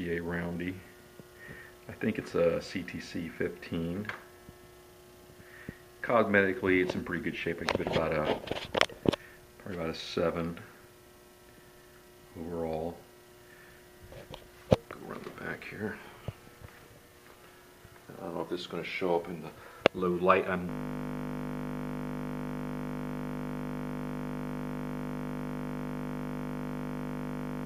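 A system hang loop began at 20.70 s when the computer or driver froze, leaving the hardware replaying one 20 ms buffer, heard as a steady 50 Hz buzz lasting to the end.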